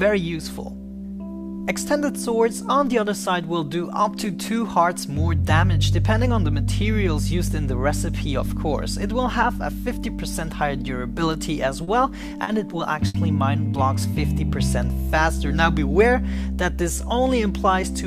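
Three short stalls from a late packet bunch up in the later part of the clip, at 11.83, 12.43 and 13.07 s. Each time a packet showed up late, so the buffer ran dry and the last bit of sound got held, for 40, 40 and then 70 ms. It resumed right where it left off, with nothing lost. It just sounds like a brief hang with a faint buzzy smear.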